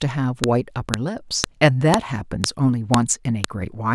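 Sharp clicks hit at 0.44, 0.94, 1.44, 1.94, 2.44, 2.94 and 3.44 s. This is a file header played as audio, repeating every 0.5 s between joined speech pieces.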